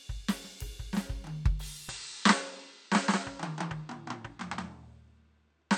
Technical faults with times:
1.89-5.77 input switched to a poorer device

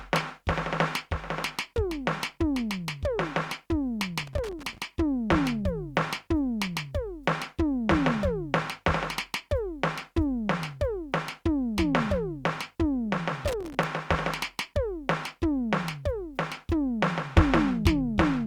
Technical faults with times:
4.18-4.78 loose connector crackle
13.48-13.84 loose connector crackle

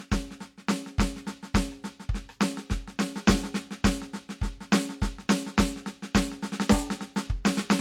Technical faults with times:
0.00-7.81 low-bitrate audio saved at a high bitrate

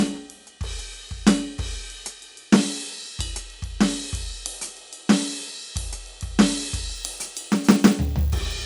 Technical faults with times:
6.95-8.66 resampler restarted on every block

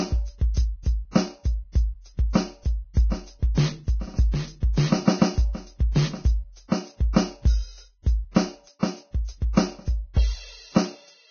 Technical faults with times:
0.00-11.31 Vorbis compression
8.37-8.39 loud pop

